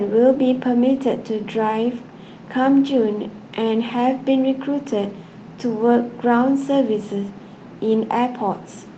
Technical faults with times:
none

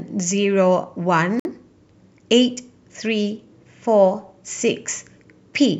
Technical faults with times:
1.40-1.45 Bluetooth stall

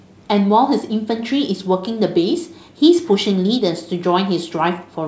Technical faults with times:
none

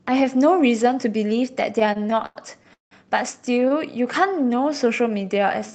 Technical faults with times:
1.79-2.93 repeated stalls (stutter)
3.45-3.72 repeated stalls (stutter)
4.27-5.73 jitter buffer slow-down

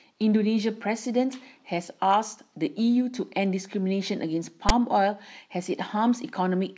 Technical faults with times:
4.69 file tags played as audio

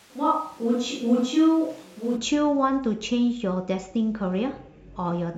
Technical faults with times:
0.00-2.15 switch to a distant microphone

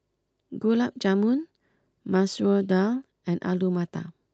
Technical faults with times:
none

